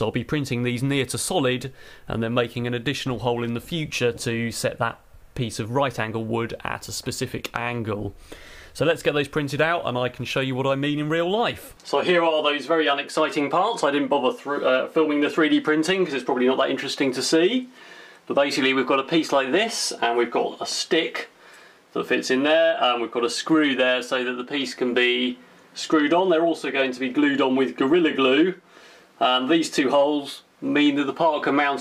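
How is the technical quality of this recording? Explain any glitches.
Nothing stood out as a technical problem on listening, and there are no glitches to explain.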